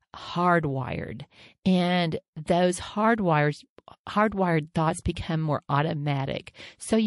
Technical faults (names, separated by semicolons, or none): MP3 compression